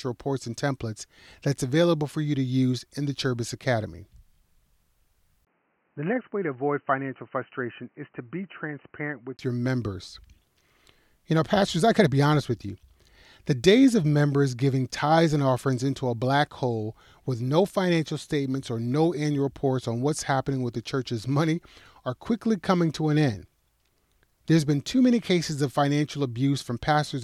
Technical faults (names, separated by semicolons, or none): input switched to a poorer device